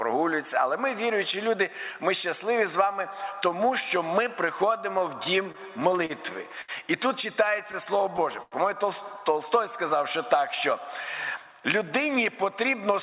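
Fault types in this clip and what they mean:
Repeated stalls (stutter), 5.24–6.11 s and 7.59–8.54 s: late packets emptied the jitter buffer six times in each span, so sound was held or faded, up to 92 ms, causing a dragging stutter.
Short stall from a late packet, 6.61 s: one packet missed its slot, so the last sound was stretched about 70 ms before playback resumed with nothing lost.
Jitter buffer slow-down, 9.58–10.41 s: the receiver repeated pitch periods to rebuild its reserve, adding 45 ms and slowing the audio to 96% speed without changing pitch.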